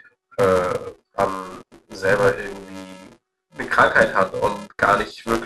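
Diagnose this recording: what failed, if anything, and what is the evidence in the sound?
The filter is restarted on every block, somewhere in the block-based processing, likely at the driver or buffer stage. Under the speech there's a steady buzz at 375 Hz for the whole clip, louder as the speech gets louder and dropping away in the gaps. That rate fits 128-sample blocks at 48 kHz. The filter throws away its memory at each block boundary and starts from silence, so every block opens with a tiny transient.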